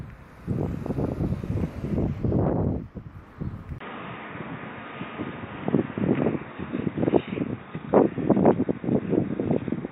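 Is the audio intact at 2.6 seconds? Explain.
Yes, at 2.6 seconds the audio is intact, with no fault audible at that moment.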